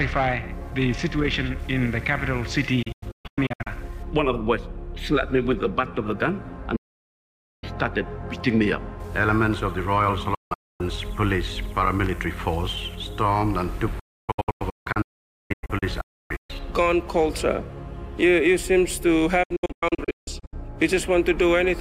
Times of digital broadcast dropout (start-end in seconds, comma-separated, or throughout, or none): 2.82-3.67, 6.76-7.64, 10.34-10.81, 13.99-16.50, 19.43-20.53